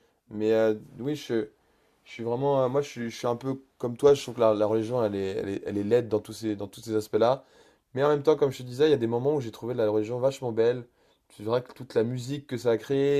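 No technical faults can be heard anywhere in the recording; the signal stays steady and intact throughout.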